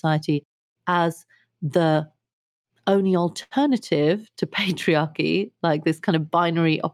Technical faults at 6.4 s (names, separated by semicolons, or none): jitter buffer speed-up